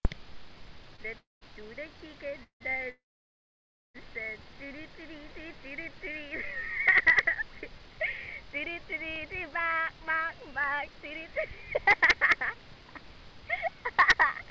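Right at the start, from 0.92 to 1.09 s, there's a short bout of repeated stalls (stutter): three tiny gaps, the longest about 19 ms, where packets showed up late, the jitter buffer drained, and the receiver stretched the last bit of sound to cover. It drags and catches briefly, with nothing lost.

Straight after come three call audio freezes. At 1.19 to 1.43 s the sound hangs for about 228 ms, fading to silence for the last 160 ms or so. At 2.43 to 2.62 s it's about 169 ms, with around 90 ms silent. The big one runs from 2.90 to 3.96 s: roughly a second of fill, a brief held-over buzz that dies away into about 940 ms of silence. Packets were likely held up in transit, so the buffer emptied, the receiver faded out its continuation, and then picked up where it left off, inserting a gap without dropping anything.

Later, from 9.68 to 11.88 s, the jitter buffer speed-up kicks in. With surplus audio built up in the buffer, the receiver trims out small pitch-period-sized pieces over and over, around 70 ms in total, so that stretch plays about 3% fast at unchanged pitch. 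Throughout, the G.722 call path leaves nothing above 8 kHz.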